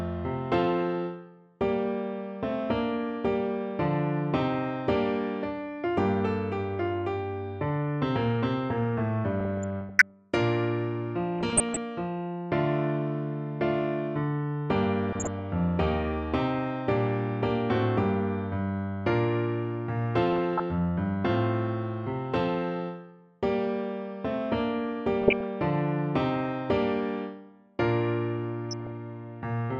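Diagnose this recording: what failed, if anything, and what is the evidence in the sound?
Short blips of noise burst over the sound at 9.40–10.10, 11.40–11.77, 15.09–15.39, 20.33–20.60, 25.21–25.44 and 28.71–28.97 s. This is DAB burbling at the codec stage: weak reception let a fraction of a percent of bit errors slip into the MP2 data, corrupting samples so single sub-bands carry short noise blips.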